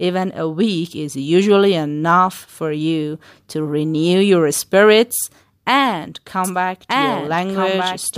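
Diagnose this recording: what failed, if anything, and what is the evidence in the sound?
A doubled audio track, likely from a second, slower capture path or an editing error, enters abruptly at 6.44 s after "renew your spirits and" and runs to the end. A dry, full-band copy trails about a second and a half behind, roughly 5 dB quieter.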